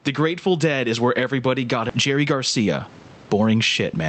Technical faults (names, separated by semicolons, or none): gain pumping; skip ahead; jitter buffer speed-up